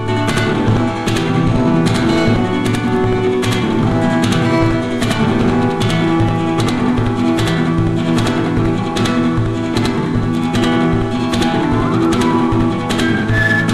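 From start to finish the audio carries a channel delay (doubling): one channel runs about 85.3 ms behind the other, which fits a 4096-sample buffer, and the two are then summed to mono. At that spacing the copies no longer fuse. The late channel arrives as a distinct second image at equal level, so every onset is followed by a slap echo, and sustained material sounds doubled and smeared rather than single and tight.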